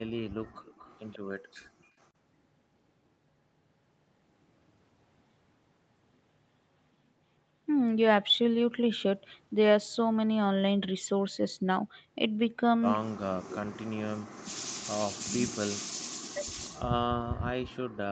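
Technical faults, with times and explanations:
0.65–1.19 s, 2.00–2.06 s and 13.49–13.56 s: echo leak. A delayed copy of the sound trails by 140 ms. It sits roughly 30 dB down at first, fainter near 2.0 s, and only about 15 dB down at 13.5 s. The likely cause is a loudspeaker whose echo canceller let pickup through.
1.40–1.96 s: background gated by the echo canceller. The room sound drops away abruptly, by about 39 dB at its deepest, for roughly half a second, then returns. The microphone was turned down hard while loudspeaker playback was detected.
13.21–14.70 s and 15.00 s to the end: speech suppressed in double talk. The talker dips and breaks up in pieces, with drops of around 40 dB, first for about a second and a half, then through the close. This is likely an echo canceller mistaking overlapping talk for echo.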